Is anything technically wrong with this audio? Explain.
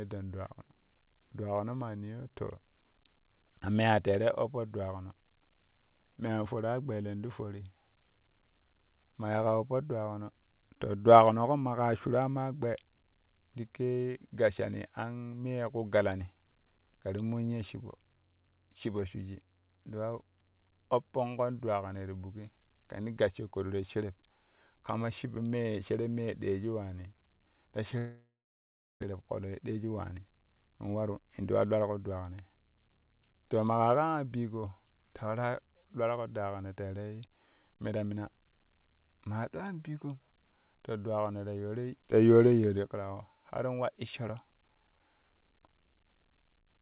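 Yes, there are two related faults, heard over a narrowband call path whose audio stops at 4 kHz, consistent with a G.711-type codec.

Long network dropout, 27.98 to 29.04 s. Incoming audio most likely stopped arriving for about a second. The receiver extended the last sound into a fading buzz. About 0.72 s of that stretch is silence or low steady noise, and roughly 0.6 s of the original audio never plays. When sound resumes, the lost part is simply skipped, and the delay has built up by around 400 ms.

Jitter buffer speed-up, 29.12 to 32.5 s. After the gap, the late audio arrived in a burst and overfilled the buffer. To shrink the backlog, the receiver repeatedly cut out short pitch-period-length pieces, removing roughly 400 ms in total. Playback runs at about 112% speed with unchanged pitch, so this passage sounds noticeably hurried until the buffer settles.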